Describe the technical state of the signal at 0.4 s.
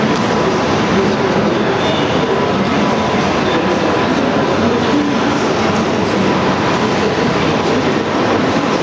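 At 0.4 s the signal is intact, with only the ordinary band limit of call microphone processing, nothing above 8 kHz and the lowest bass trimmed, and no fault in the sound at that point.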